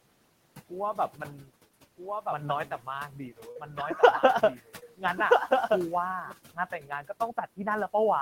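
Noise suppressor artifacts run through the whole of this speech recording. The suppressor pulls the steady background down by about 17 dB frame by frame, so the room noise, which sits about 20 dB under the speech, drops away in the gaps and comes back under each phrase. A doubled audio track runs from 1.96 to 6.32 s. A second full-band copy of the sound, about 5 dB quieter, trails roughly a second and a half behind. It has no reverberant tail or room colouring, and it starts and stops abruptly at those edges. That clean, fixed-offset echo points to the likely cause: the same signal was captured again through a slower path and mixed back in. Speech cut by the noise suppressor occurs at 2.66 to 2.87 s, 3.11 to 3.78 s, 4.56 to 5.18 s and 6.79 to 7.21 s. The suppressor mistook parts of the speech for noise and turned them down with the background, by about 10, 13, 15 and 13 dB at the deepest points, so soft consonants and word endings sound swallowed or faint. 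Short concealed packet loss shows up at 3.51 to 3.57 s, where 40 ms of audio failed to arrive, and at 4.79 to 4.83 s, where 20 ms was lost. Both fall inside suppressor cuts. In each gap the receiver extended the preceding sound and then crossfaded back into the real signal, which leaves a brief smear or wobble in place of the missing sound.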